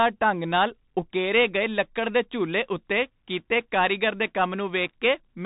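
From start to finish the speech carries the damage of the Bluetooth CVSD headset codec. Nothing above about 3.8 kHz survives, so the voice is boxed into a narrow telephone band. The coder tracks the waveform one bit at a time with an adapting step, which fits a 64 kbps link. Where it lags behind fast changes, sibilants turn scratchy, and a granular hiss sits under the voice. A plain low-pass filter would dull the sound without that grainy, rasping texture.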